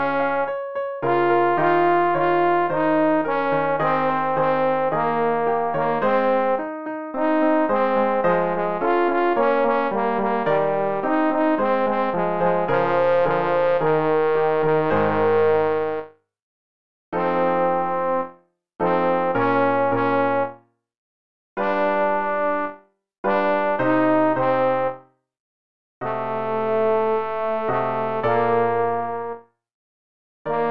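No technical faults can be heard in this audio. There is no moment in the recording that calls for a timestamp or a fix.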